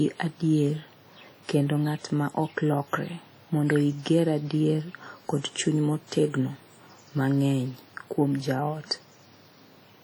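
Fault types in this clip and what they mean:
WMA compression: Throughout the speech, the sound rings and smears, with a washy hiss that swells and fades with the speech while weak detail drops out. This heavy damage is likely from Windows Media Audio encoding at a low bitrate, which fits around 32 kbps. A transform coder using long blocks spreads its quantisation error over tens of milliseconds around each sound and zeroes the faintest spectral components, leaving this blurred, breathing texture.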